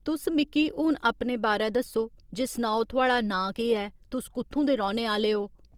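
All the way through, this speech has plainly audible Opus compression damage, likely from a low bitrate around 24 kbps in music (CELT) mode. Content still reaches about 20.2 kHz, but starved bands get filled with folded or noisy energy, so the voice sounds grainy and rough.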